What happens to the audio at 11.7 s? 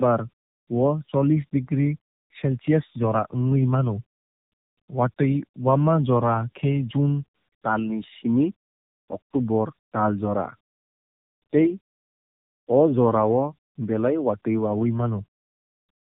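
Tandem speech coding is present at 11.7 s, as it is across the whole clip. The speech sounds like it passed through two narrowband coders in a row, likely AMR-NB with a G.711 link between them. Each coder re-encoded the previous one's degraded output, so the speech is rough, muffled and warbly, with nothing above 3.8 kHz.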